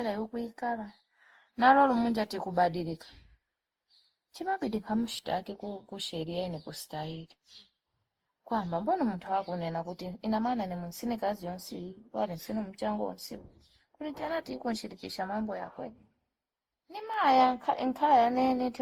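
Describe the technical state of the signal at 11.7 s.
At 11.7 s the speech carries generation loss, present through the whole clip rather than at this moment alone. The sound is swirly and hollow, with smeared consonant attacks and a watery texture beyond what one lossy pass would leave. The likely cause is repeated decoding and re-encoding, consistent with around seven passes through Opus at about 48 kbit/s. Each pass requantises on a shifted frame grid, so noise accumulates.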